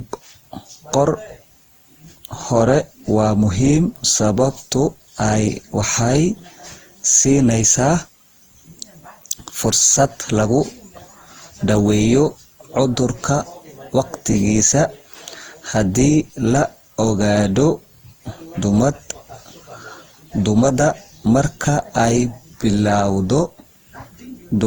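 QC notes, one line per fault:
throughout: generation loss. The speech sounds swirly, smeared and hollow, with blurred attacks, beyond what one encode would leave. This is likely from around ten successive lossy passes, consistent with Opus near 48 kbit/s. A spectrogram shows smeared onsets and nothing above 20.2 kHz.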